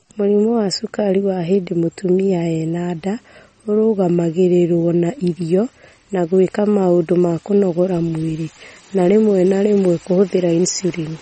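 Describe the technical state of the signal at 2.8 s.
At 2.8 s you're hearing the same damage that runs through the whole clip, and it's likely MP3 compression at a low bitrate, around 32 kbps. Everything above about 8.4 kHz is simply gone, so the speech sounds dull and boxed in. The encoder is starving for bits, so weak frequency lines keep dropping in and out frame to frame, giving that watery, swirly texture, with s sounds going metallic and chirpy.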